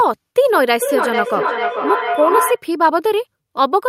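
From 0.54 to 2.64 s a feedback howl builds near 1 kHz, pulsing roughly every 400 ms and peaking about 3 dB below the speech, as the mic-to-speaker loop keeps gaining.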